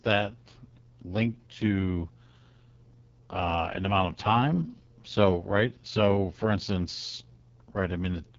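Speech, passed through an AMR wideband (HD Voice) codec for its whole length. The sound is rough and raspy, which fits the codec's lowest 6.6 kbit/s mode. Too few bits go to modelling the voice. Nothing reaches above 7.5 kHz.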